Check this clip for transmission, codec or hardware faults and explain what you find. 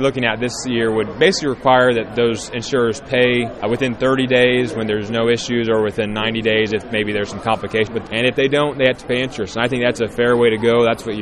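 Nothing amiss can be heard anywhere in this recording.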